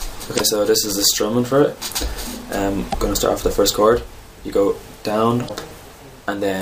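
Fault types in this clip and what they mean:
Damaged data in a compressed stream: part of the encoded stream is wrong, with bytes lost, zeroed, overwritten or mixed with other data, so the decoder misreads or rejects those frames, loses sync and searches for the next header. It happens three times here, at 0.35 to 0.41 s, 2.89 to 2.95 s and 5.45 to 5.50 s. Each lasts about 55 ms and comes through as a brief disturbance in the sound while the decoder recovers.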